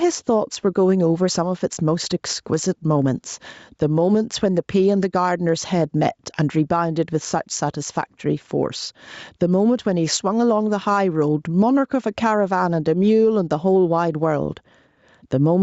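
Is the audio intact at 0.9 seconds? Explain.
No. At 0.9 seconds the audio shows gain pumping, present from start to end of the clip. The level is likely being pushed too hard into a fast limiter or compressor, so each loud sound forces the gain down by around 10 dB. The waveform shows a flattened, squashed envelope, and on the spectrogram everything sits under the 8 kHz ceiling of the call path.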